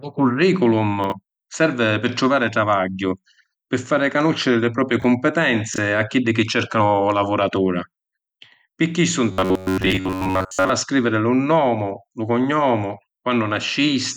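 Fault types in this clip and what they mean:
Chunks out of order: 20 ms blocks play after ones that should follow them, causing jumbled moments near 1.04 s, 5.0 s and 5.74 s.
Robotic sound from repeated short buffers: from 9.32 to 10.69 s the speech becomes a rigid metallic buzz at 93.8 Hz, likely from a roughly 10.7 ms buffer repeated over most of the span.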